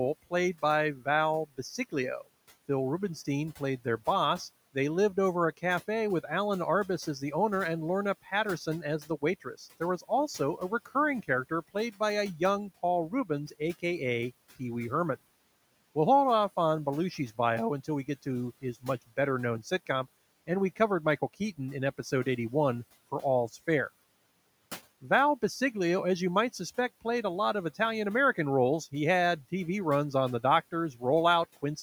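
Speech in which the noise suppressor cuts into the speech five times: 0.95–1.07 s just after "played by", 1.49–1.94 s, 9.05–10.89 s, 11.23–12.01 s just before "a young", and 13.1–13.83 s. It mistakes soft consonants and word endings for noise and turns them down by about 11 to 17 dB at the deepest, so syllables sound swallowed. Only part of each span is affected, from about a tenth to a third of a second. On a waveform these appear as notches in the speech envelope. On a spectrogram they show as faint holes where consonant energy and the steady room noise, about 24 dB below the speech, dip together.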